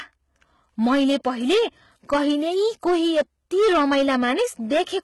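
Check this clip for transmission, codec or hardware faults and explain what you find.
Two faults run through the whole speech clip: clipping on the loud parts and heavy codec damage in the treble.

Hard clipping, throughout: the louder syllables carry a crackling, fuzzy edge. The signal was driven about 11 dB past what a stage could pass, so around 7 percent of samples hit the ceiling and were cut flat, and those flattened tops add harmonics high up the spectrum.

HE-AAC compression, throughout: s sounds and other high detail come across gritty and metallic, and nothing reaches above 11.8 kHz. The likely cause is HE-AAC at a low rate, which fits about 16 kbps. It codes only the lower spectrum and fills the treble by copying lower bands upward, so the rebuilt harmonics don't line up with the real ones.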